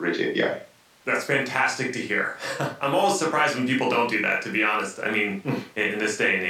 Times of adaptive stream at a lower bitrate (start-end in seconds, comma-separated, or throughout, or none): none